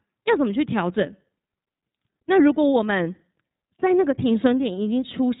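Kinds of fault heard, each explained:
iLBC codec: The speech sounds boxed-in and telephone-like, with a grainy, slightly synthetic roughness that is plainly audible across the whole clip and nothing heard above about 3.8 kHz. This comes from the iLBC narrowband VoIP codec, which discards the upper band and codes each short frame's excitation independently of the one before, so small discontinuities between frames give that coarse texture; the character fits 20 ms frames at around 15.2 kbps.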